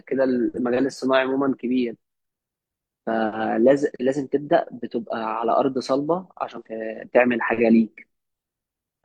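At 6.55 to 6.62 s, damaged data in the compressed stream makes the decoder lose sync, giving a brief chirp, squawk, click or short hole, unlike a clean dropout's silence.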